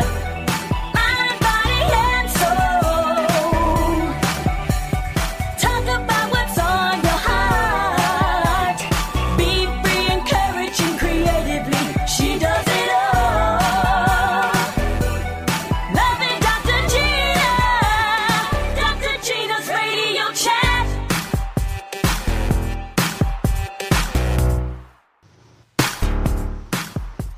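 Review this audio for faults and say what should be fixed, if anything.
Nothing needs fixing, because no technical faults can be heard anywhere in the recording. The audio can be left as it is.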